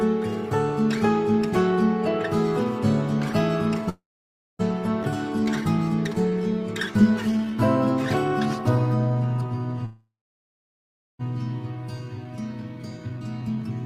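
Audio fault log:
3.89–4.61 s and 9.85–11.21 s, call audio freeze: the sound trails into a fading buzz and then silence (about 0.58 s and 1.1 s), then resumes where it stopped with nothing lost. This is likely packets stalled until the jitter buffer ran dry, unlike a dropout that deletes audio.
5.03–5.05 s, skip ahead: playback jumps forward almost without a gap, losing around a third of a second. The two sides are spliced directly, with no fade or silence as in a freeze.
5.40–5.79 s, 6.31–7.56 s and 8.76–9.60 s, jitter buffer slow-down: repeated pitch periods stretch the sound to about 90–91% speed at unchanged pitch, drawn out rather than lower-pitched.
12.01–13.70 s, jitter buffer speed-up: short pitch-period slices are cut repeatedly, so the sound runs about 15% fast at the same pitch, hurried but not chipmunk-like, shedding roughly a third of a second.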